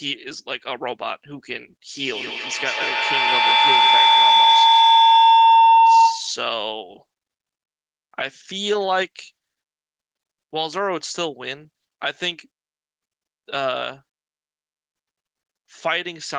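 From 1.96 to 6.48 s, feedback howl builds near 1 kHz, with the loop repeating about every 150 ms and peaking about 11 dB above the speech, as a mic-to-loudspeaker loop gains level.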